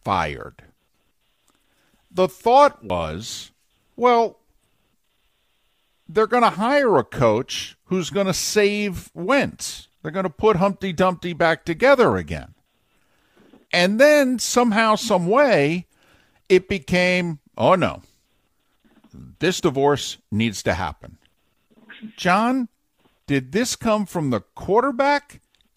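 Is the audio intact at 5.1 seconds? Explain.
Yes, at 5.1 seconds the speech plays through intact, with no dropout, click, distortion or other fault to be heard.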